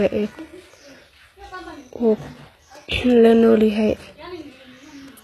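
Throughout, the s sounds come across gritty and lispy, with a bright but artificial-sounding treble that stops entirely around 12.3 kHz. This is likely HE-AAC compression at a rate that fits about 16 kbps, with its upper band rebuilt from copied lower harmonics.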